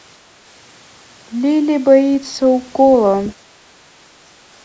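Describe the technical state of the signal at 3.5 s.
At 3.5 s the background is gated by the echo canceller. The span runs from 3.38 to 3.59 s. The canceller sensed the far end playing through the loudspeaker and pulled the microphone down hard to keep that echo out. The room tone behind the speech sinks by about 6 dB, over roughly 150 ms in total. It then comes back as the canceller releases. The call's microphone processing leaves nothing above 8 kHz.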